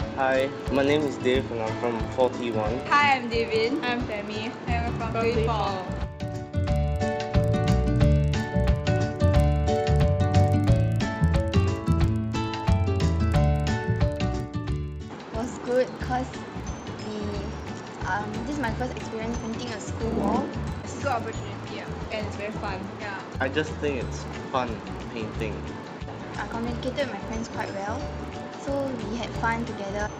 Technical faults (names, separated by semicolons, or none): resampler restarted on every block